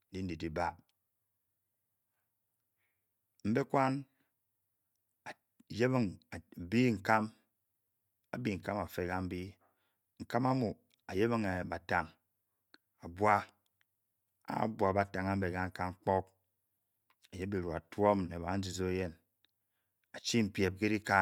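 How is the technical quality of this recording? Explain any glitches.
No glitches or technical faults are audible anywhere in the recording.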